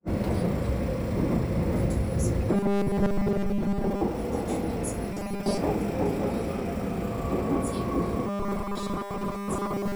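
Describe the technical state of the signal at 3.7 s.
At 3.7 s the signal sits inside a stretch of robotic sound from repeated short buffers running from 2.53 to 4.01 s. The sound has a rigid, metallic 200 Hz buzz imposed on it, and most of the material seems to be replaced by repetition. The likely cause is audio arriving too seldom, so playback loops the last short buffer to fill the gaps. A 200 Hz buzz fits a looped segment about 5 ms long.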